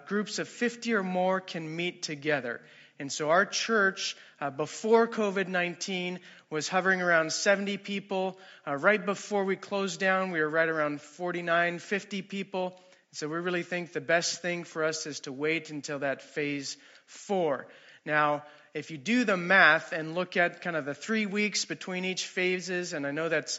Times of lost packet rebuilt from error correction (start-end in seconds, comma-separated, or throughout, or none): none